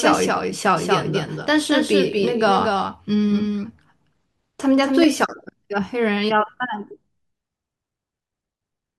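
A slower second path likely captures the speech twice: a doubled audio track, about 200 ms late and 5 dB quieter, runs until 5.04 s, stopping abruptly.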